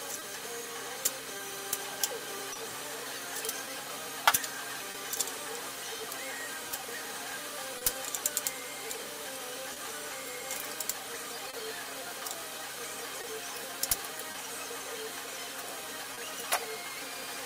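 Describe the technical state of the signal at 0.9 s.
At 0.9 s the signal sits inside a stretch of scattered short gaps, running from about 0.19 s to 7.83 s. Packets went missing or arrived late one at a time, around seven of them, and the receiver covered each hole by extending the last sound. The patches total roughly 150 ms, with the longest around 30 ms, so they come across as brief ticks or smears in otherwise clear audio. Each gap stands alone, which distinguishes this from a periodic stutter.

The moment is also affected by clock drift between sender and receiver, which runs through the whole clip. The sender's clock runs about one and a half percent slower than the receiver's, so the jitter buffer keeps draining and the receiver fills the shortfall by repeating tiny pieces of sound. This produces small timing hiccups at uneven intervals across the entire recording, not only within the span of gaps, and that is how the drift can be told apart from packet loss.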